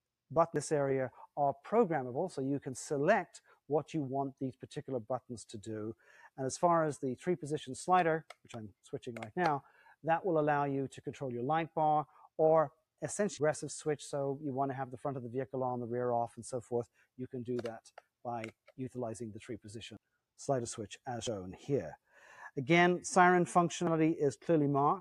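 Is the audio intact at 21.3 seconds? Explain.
No. At 21.27 s there is a dropped buffer, or overrun. The sound skips straight ahead with no gap of silence. Roughly a tenth of a second of audio is missing. The two sides of the cut are butted together, so the sound jumps abruptly. The likely cause is that the program failed to collect its samples in time, and the hardware wrote over that stretch before it was read.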